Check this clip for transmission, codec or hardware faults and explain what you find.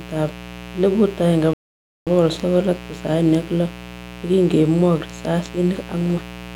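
Two faults are present. One runs through the whole clip, and one interrupts it once.

A mains buzz sits under the speech from start to finish. It is built on 60 Hz. A dimmer, rectifier or poorly shielded line is letting sharp switching spikes into the signal, twice per mains cycle. Those spikes carry harmonics of 60 Hz far up into the kilohertz range. The result is a steady, raspy buzz rather than a soft hum. It sits roughly 15 dB below the speech.

A rebuffering stall occurs at 1.53 s and lasts until 2.07 s. The player ran out of downloaded audio and had to wait for more. The speech drops to silence for about 0.53 s. It then resumes exactly where it stopped. No speech is lost or skipped. The gap simply adds about half a second to the running time.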